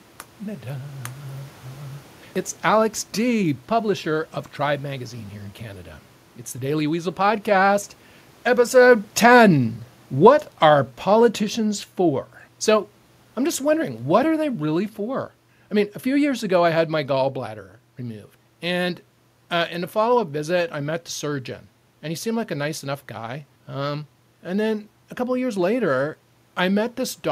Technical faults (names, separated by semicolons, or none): automatic gain falling